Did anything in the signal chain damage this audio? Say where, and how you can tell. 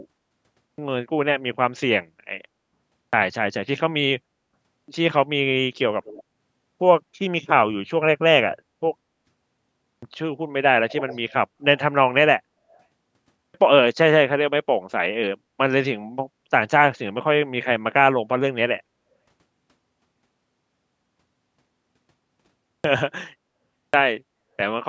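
Yes. Clipped start after a pause happens at the playback stage, at 0.42, 2.77, 4.57, 9.67, 13.23, 22.51 and 23.59 s. Each onset after silence begins abruptly, with roughly 0.31 to 0.36 s of speech missing. The output device sleeps during pauses and loses the start while it wakes.

Echo leak comes from the call processing. At 6.04 to 6.24, 10.9 to 11.33 and 12.72 to 12.78 s, a delayed copy trails the speech by 185 ms. It is faint at first, clearly audible in the middle and barely there at the end. The likely cause is a loudspeaker whose echo canceller let residue through.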